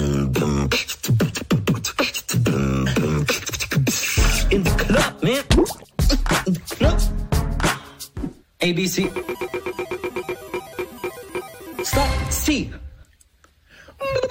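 No technical faults can be heard anywhere in this audio; the signal stays continuous and stable throughout.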